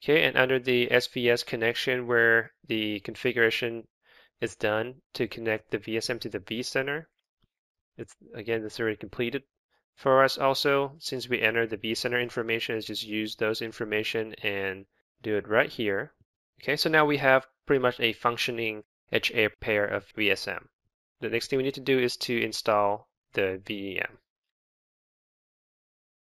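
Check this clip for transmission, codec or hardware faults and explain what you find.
One fault runs throughout: imaging from linear upsampling. Weak straight-line interpolation, which fits a 16 kHz source raised to 44.1 kHz, dulls the top and leaves a faint 8 to 16 kHz mirror image, roughly 30 dB down, heard as metallic shimmer.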